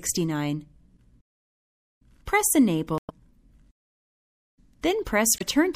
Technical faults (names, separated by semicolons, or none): MP3 compression; damaged data in a compressed stream